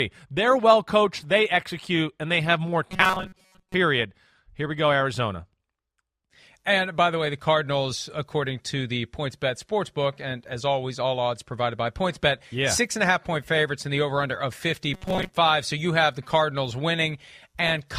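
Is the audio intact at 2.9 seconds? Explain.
No. Right after "and they have more", from 2.91 to 3.75 s, the speech turns robotic. It sounds like repeated short buffers: a rigid metallic buzz near 188 Hz, which fits a repeat of about 5 ms. Most of that stretch is likely copies while fresh audio is skipped.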